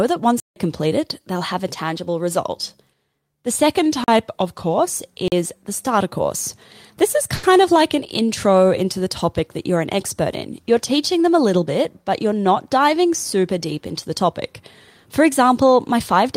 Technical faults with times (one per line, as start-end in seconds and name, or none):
0.40-0.56 block of digital silence
3.79-4.79 drift correction step
4.04-4.08 block of digital silence
5.28-5.32 block of digital silence
7.35-7.45 short stall from a late packet